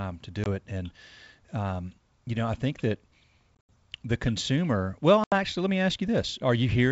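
A speech clip with packet loss on an ADPCM call: silent holes at 0.44 s, 3.56–3.70 s and 5.24–5.33 s, each followed by mistracked ADPCM predictor distortion.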